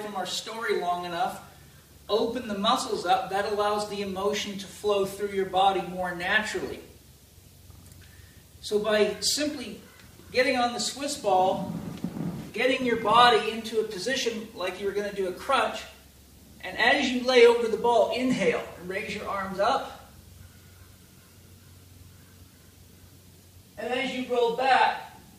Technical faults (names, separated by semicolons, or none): resampler restarted on every block